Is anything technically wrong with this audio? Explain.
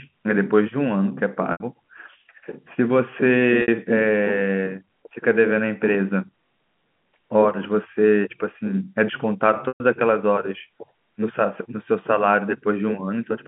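Yes. At 1.52 s, 3.62 s and 9.68 s the speech briefly catches on a held, buzzy tone lasting 80, 60 and 120 ms. The longest fades toward silence before the speech cross-fades back in. This is packet loss with pitch repetition: the receiver loops the last pitch period to cover missing packets, fading it out, all within the narrow telephone band of G.711 coding.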